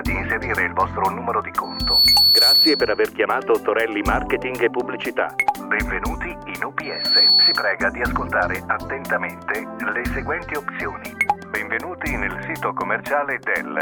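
A loudspeaker feedback squeal occurs twice, from 1.63 to 3.07 s and from 6.83 to 7.73 s, each time as a pure tone at 4.4 kHz that swells up over a fraction of a second and sits roughly 10 dB above the surrounding sound. The microphone is hearing its own loudspeaker. At 4.4 kHz the loop gain passes unity, so that frequency grows on itself until the amplifier limits it or the loop is broken.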